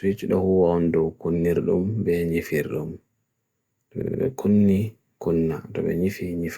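Repeated frames from 4.02 to 4.21 s: a 64 ms block, which fits two compressed frames, plays three extra times, producing a stutter that adds 192 ms.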